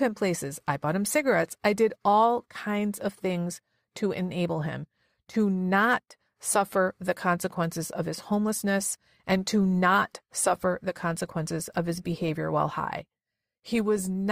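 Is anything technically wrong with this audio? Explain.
Yes, there's one problem. From 9.12 s to the end, the speech suddenly switches to an adaptive stream at a lower bitrate, with no gap: artefacts rise, consistent with roughly halving from 64 to 32 kbit/s.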